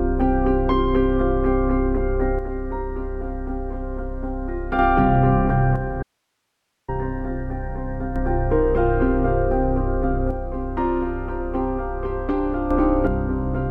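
One channel drops out from 2.39 to 4.79 s and again from 5.76 to 8.16 s: the level falls abruptly by about 6 dB and recovers just as suddenly, likely because one stereo side was lost before the mono sum, halving the shared content.

An audio dropout to a faint residue cuts in at 6.03 s, during the second channel loss, and lasts 0.85 s until 6.88 s. The sound vanishes mid-flow, leaving only hiss roughly 55 dB below the normal level, likely from the signal being lost while the downstream path stayed live.

One channel drops out again from 10.31 to 12.71 s, and once more from 13.07 s to the end, each time with the same sudden drop of about 6 dB.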